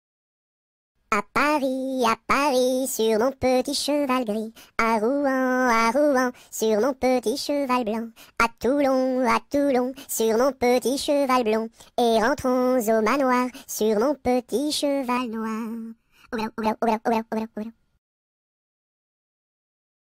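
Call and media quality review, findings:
Channel delay (comb filtering), 15.17–16.66 s: sound goes hollow and phasey, fixed notches starting around 700 Hz. One channel lagging around 0.7 ms before the mono sum, so shared content cancels at evenly spaced frequencies. Check the capture or mixdown stage.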